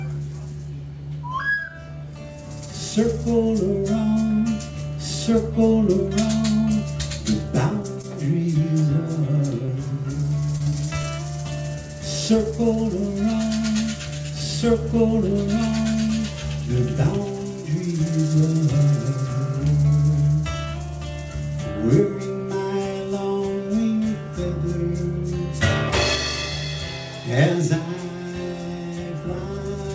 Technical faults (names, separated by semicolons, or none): short stall from a late packet; short concealed packet loss; repeated packet loss (robotic sound)